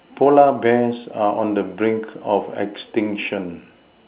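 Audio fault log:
No fault to log for this audio.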